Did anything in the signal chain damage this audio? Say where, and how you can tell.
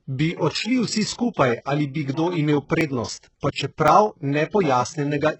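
Yes. The codec stage did heavy damage. The treble sounds rebuilt rather than recorded. S sounds turn gritty and lispy. That points to HE-AAC compression at a very low bitrate, likely around 8 kbps, with band replication faking the top.

The driver or buffer stage also failed twice. At 2.81 s and 3.88 s there is a sudden jump in the speech, and no gap of silence. The first skips around 20 ms, the second about 10 ms. That is likely a dropped buffer (overrun), with the two sides spliced together.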